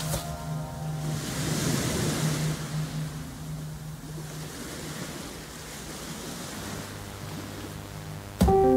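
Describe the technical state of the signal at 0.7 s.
At 0.7 s the signal is intact, with no dropout, distortion, glitch or other audible fault.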